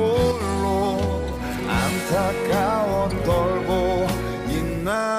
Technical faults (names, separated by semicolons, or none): one channel drops out